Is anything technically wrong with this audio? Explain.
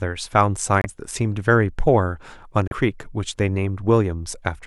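Yes. At 0.82 to 0.86 s and 2.68 to 2.73 s the speech cuts to silence for about 26 and 36 ms, then resumes. This is likely a Bluetooth stall: interference held packets up, the headphones' buffer ran dry and playback paused until resent packets arrived. Unlike a lost-packet glitch, nothing is smeared.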